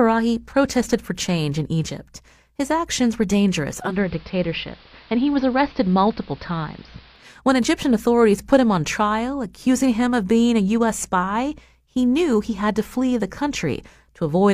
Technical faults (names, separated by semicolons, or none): digital radio blending to analogue